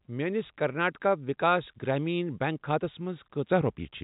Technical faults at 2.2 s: none

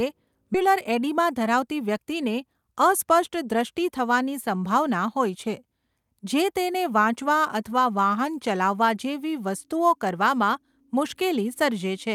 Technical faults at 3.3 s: none

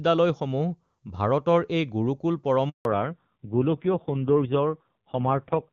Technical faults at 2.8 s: handover gap; fallback to narrowband

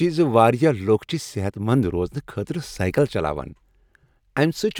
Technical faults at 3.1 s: none

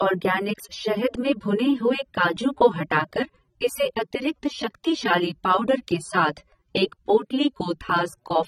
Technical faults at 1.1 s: low-bitrate audio saved at a high bitrate

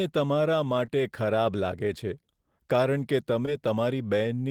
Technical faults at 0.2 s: none

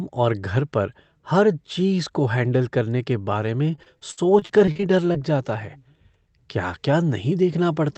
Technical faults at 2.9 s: none

